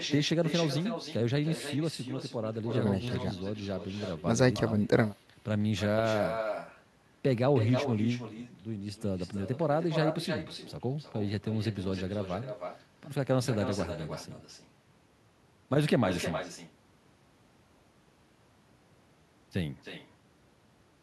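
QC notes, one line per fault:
Throughout: echo with no canceller. The far end plays the call over a loudspeaker, its microphone picks it up again, and nothing in the path strips that out. Each phrase of speech returns roughly a third of a second later, about 8 dB down, as a thinner copy.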